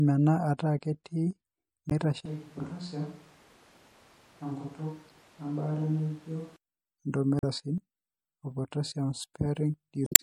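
The whole clip sounds watery and swirly, with dull treble and smeared attacks. That is likely MP3 compression at a low bitrate, around 64 kbps. At 1.87 to 1.92 s a glitch marks damaged data in a compressed stream. The decoder loses sync. From 2.26 to 6.56 s the speech turns hollow, roomy and about 5 dB quieter. This is likely a switch to a distant microphone, with room noise rising. Inside that stretch, another blip of damaged data hits at 5.09 s. More damaged-data glitches follow at 7.39 to 7.44 s and at 10.04 to 10.2 s.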